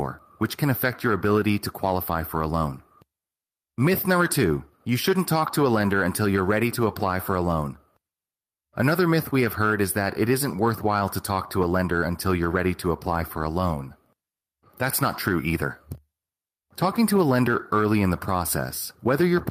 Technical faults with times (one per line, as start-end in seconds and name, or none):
0.00-19.50 gain pumping